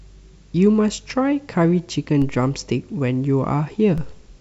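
DC steps at 2.22 s and 3.98 s: the waveform's zero line abruptly jumps by about -21 dBFS, then drifts back as a 2 Hz high-pass bleeds the offset away. Each jump lands as a brief low thump beneath the speech, which carries on unchanged.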